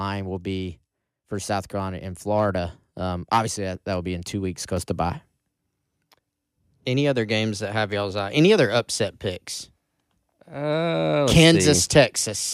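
At 3.75 s, just before "that will be in", the microphone volume stepped up by about 3 dB, and at 4.77 s, between "be in two weeks" and "to buy", it stepped up again by about 4 dB. Each time the call software judged the input too quiet and raised the device's input volume in a single step, so the speech and the background noise jump louder together, abruptly, rather than rising smoothly.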